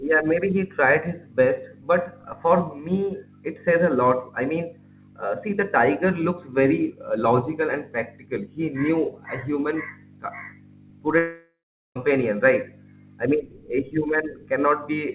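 From 11.18 to 11.96 s, a likely long network dropout: the speech smears into a fading buzz, then 0.39 s of silence, far longer than a brief packet glitch.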